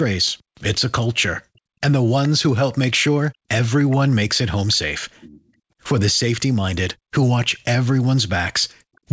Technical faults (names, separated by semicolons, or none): background gated by the echo canceller; echo leak